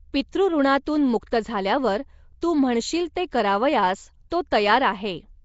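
Throughout the speech, a rough, hissy halo clings to every syllable and the sound is smeared and underwater, likely from Nellymoser compression at a rate suggesting about 32 kbps. Starved bands become noise, so a spectrogram shows grainy speckle between harmonics and a hard ceiling at 7.7 kHz.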